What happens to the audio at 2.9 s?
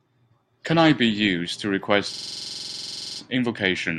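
At 2.9 s the sound is caught in a system hang loop running from 2.14 to 3.20 s. The frozen driver leaves the hardware replaying one 46 ms slice, which fits a 2048-sample buffer, 23 times. The result is a rigid machine-gun stutter at 21.5 Hz. Its perfectly identical repeats set it apart from irregular network-dropout stutter.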